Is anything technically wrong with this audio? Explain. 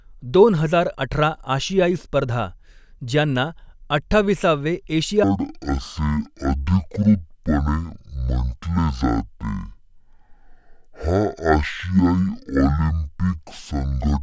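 Yes. From 5.24 s to the end, a wrong sample rate plays the speech at half speed and an octave lower, consistent with 32 kHz audio played at 16 kHz. On a spectrogram, harmonics drop to half their height; the waveform stretches to twice its length.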